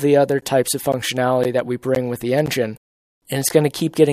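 Audio delivered in half-second chunks has silence inserted at each join, producing a gap between chunks: hard-edged 13 ms holes at 0.41, 0.92, 1.44, 1.95, 2.46 and 3.49 s.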